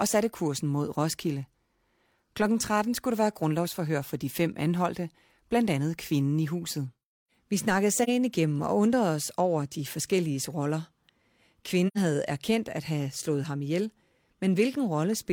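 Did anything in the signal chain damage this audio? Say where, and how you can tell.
Yes. AAC frame loss with muting in the codec: soft holes at 8.03 s before "igennem og undrede os" and 11.87 s before "havde erkendt at have". Their lengths fit one and two zeroed frames, faded by overlapping windows.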